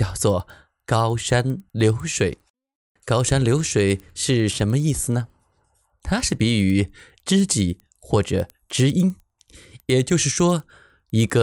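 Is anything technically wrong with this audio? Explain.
Yes. Throughout the speech, a resampler restarted on every block leaves a regular ticking at 10 Hz. The conversion from 24 kHz to 48 kHz was run on 100 ms blocks in isolation, so at each edge the filter lacked the true neighbouring samples and produced a small error. The ticks come and go with the signal, vanishing in pauses. A spectrogram shows faint vertical broadband lines every 0.1 s over voiced regions, and the waveform shows tiny discontinuities at those points.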